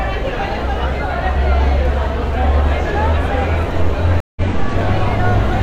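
A short recording of sounds has a stream reconnect fault at 4.20 to 4.41 s. The playback drops into about 160 ms of silence, then resumes roughly 150 ms further along, so a small stretch of the sound is simply missing. On a waveform this is a flat-line gap followed by a restart that fades in. A spectrogram shows a blank vertical band with a hard cut at its start, where the connection broke and a fresh decoder picked up mid-stream.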